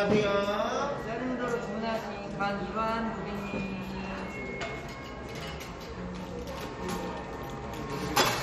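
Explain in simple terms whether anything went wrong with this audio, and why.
MP2 compression, heard throughout: the sound is dull, gurgling and grainy, likely because MP2 coding starved its bands of bits, leaving nothing above 14.6 kHz.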